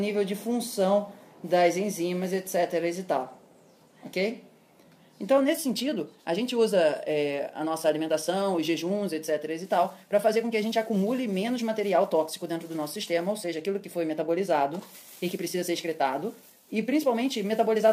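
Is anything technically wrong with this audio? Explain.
Yes. From 5.35 s to the end at 17.92 s there is a time-stretched section. Software likely squeezed this stretch to run about 1.35 times faster while holding the pitch steady, which it does by discarding short slices of the waveform and splicing the remainder together. At 5.35 s the pace jumps abruptly with no change in pitch, and from there the sound turns rushed.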